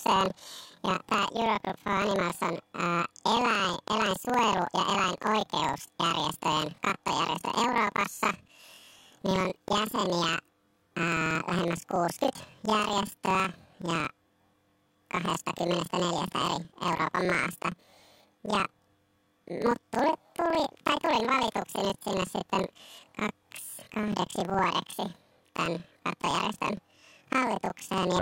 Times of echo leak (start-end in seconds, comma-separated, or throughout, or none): none